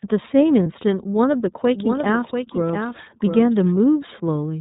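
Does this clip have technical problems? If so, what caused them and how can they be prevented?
Yes. The whole clip sounds muffled and slightly rough and synthetic, with nothing above 4 kHz. The iLBC codec at narrowband causes this, and it fits the 13.33 kbps mode with 30 ms frames. Use a wideband codec such as Opus when the network allows.

At 0.63 to 0.66 s the sound briefly turns into a held, buzzy vowel, then recovers at once. This comes from lost iLBC frames, about one 30 ms frame, which the decoder filled by repeating the last pitch cycle mixed with noise. Reduce packet loss with a steadier connection, or enable forward error correction or redundancy.

From 1.66 to 3.72 s a second full-band copy of the audio runs roughly 0.7 s behind, about 5 dB quieter. It has no room colour, and it starts and stops abruptly. This is a doubled audio track, likely from the signal being captured twice along a slower second path. 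Make sure each source reaches the mix only once, and mute monitoring or loopback routes that re-record it.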